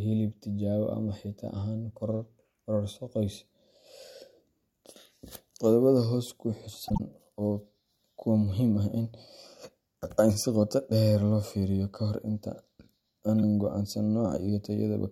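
Damaged compressed data was decoded as if valid between 6.83 and 7.00 s. This corrupt frame decoded fault spans several consecutive frames, whose flipped bits sent energy to the wrong frequencies and produced a squeaky, noisy burst peaking around -15 dBFS across the speech.

At 13.36 to 13.43 s, compressed frames were skipped, either missing or rejected by the decoder, so the speech jumps forward by about 30 ms.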